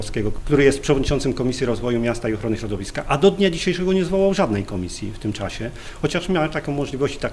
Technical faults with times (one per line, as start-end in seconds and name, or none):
none